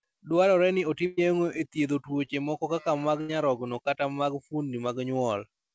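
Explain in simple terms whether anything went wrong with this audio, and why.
Two bursts of packet loss interrupt the speech, at 1.06–1.19 s and at 3.21–3.31 s, right after "moko kaka mag" and before "nyarogno kata mag". Each time the call stretched the last sound into a fading buzz or hiss, then jumped ahead, skipping about 120 ms and 80 ms of real audio.

A short concealed packet loss occurs at 2.25–2.29 s, between "e thiedho" and "moko kaka mag nyarogno". Only about 20 ms went missing, so it sounds like a tiny smear or wobble rather than a held buzz followed by a jump.

The audio also sounds dull because the call codec passes nothing above 8 kHz.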